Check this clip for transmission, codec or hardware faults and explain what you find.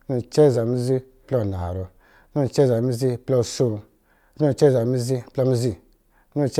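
No transmission, codec or hardware faults found.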